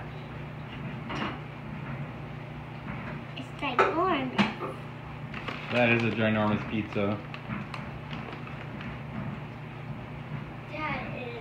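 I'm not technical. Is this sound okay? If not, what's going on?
Yes, the sound is fine; nothing in it points to a technical problem with how it was recorded, processed or delivered.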